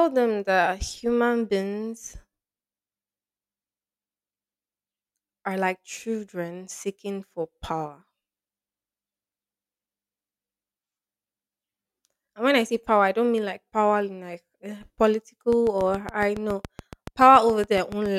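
From 15.53 to 18.07 s, a train of clicks ticks regularly at 7.1 per second, about twenty spikes showing as evenly spaced vertical lines, likely interference.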